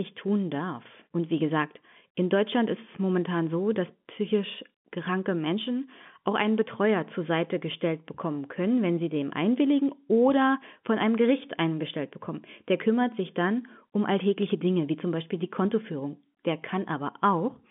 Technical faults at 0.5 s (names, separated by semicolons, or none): none